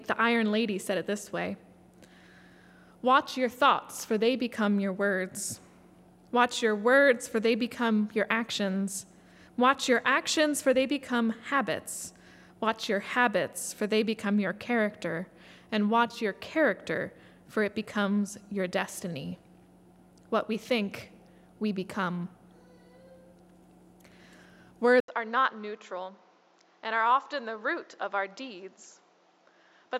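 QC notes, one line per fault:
25.00–29.99 s, input switched to a poorer device: after an 80 ms gap the sound turns duller and about 5 dB quieter, with nothing above 7.5 kHz and faint new noise roughly 35 dB under the signal. The likely cause is a change to a narrower-band microphone or headset profile. The spectrogram shows a brief blank column, then a flat ceiling at 7.5 kHz and a raised noise floor. The waveform shows a short flatline and smaller peaks afterward.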